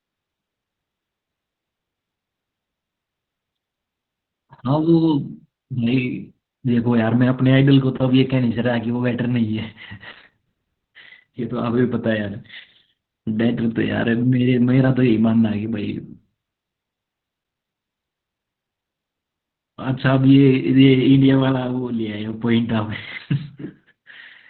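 From start to finish the speech sounds muffled and boxy, with a hoarse, slightly robotic edge and nothing audible above about 4.3 kHz. This is heavy Opus voice compression. At a bitrate that fits roughly 8 kbps, the SILK coder has dropped to narrowband, throwing away everything above the telephone-like band. It then describes the vocal excitation only coarsely, frame by frame, so the buzz and breath of the voice turn rough and synthetic.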